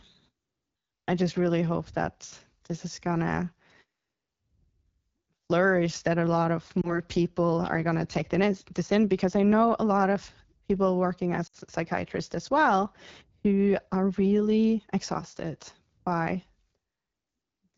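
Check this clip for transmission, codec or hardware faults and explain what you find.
Two faults are present: low-rate wideband codec damage throughout, and two brief dropouts from lost speech frames.

AMR wideband (HD Voice) codec, whole clip: the speech sounds rough and raspy, which fits a low AMR-WB rate near 8.85 kbit/s, where the vocal tract model is coarse.

Lost AMR speech frames, 6.81 to 7.00 s, after "that a lot of" and before "people are gonna take": a brief warble, consistent with one 20 ms frame concealed from the previous settings. The second, 11.47 to 11.56 s, after "lot of people working" and before "psychiatrists as well who", is a dip to near silence that fits about 60 ms of concealment.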